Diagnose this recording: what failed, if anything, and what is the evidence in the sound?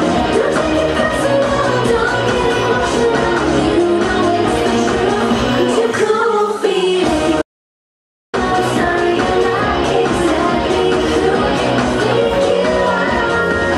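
An audio dropout to silence runs from 7.42 s to 8.34 s, removing about 0.92 s of material. The sound stops abruptly mid-flow and resumes just as abruptly, and the gap is silent with no room tone or noise floor. That sets it apart from a noise gate or a natural pause, which leave residual noise, and from network packet loss, which gives short repeated gaps. The cause is likely a momentary loss of the input device or link while recording continued.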